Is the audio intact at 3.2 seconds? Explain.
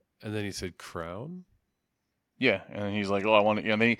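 Yes, at 3.2 seconds the audio is intact, with no dropout, click, distortion or other fault audible at that moment.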